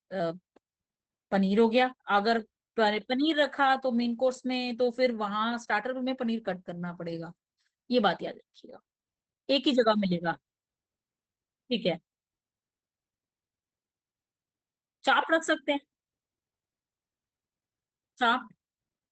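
Throughout, the speech sounds muffled, hoarse and faintly robotic: Opus voice compression at about 12 kbps, SILK coding band-limited with nothing above 8.8 kHz.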